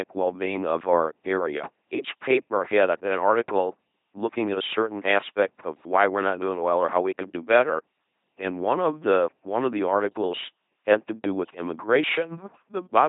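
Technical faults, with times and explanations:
Throughout: LPC-10 vocoder. Speech is rebuilt at 2.4 kbit/s from a ten-pole filter fed by buzz or hiss, giving a heavily damaged robotic voice with nothing above 3.8 kHz.
6.55–6.61 s: phantom power thump. A supply switched on or off on the live input pushes a voltage step through the coupling capacitors, producing a short low thud that dies away within 12 ms.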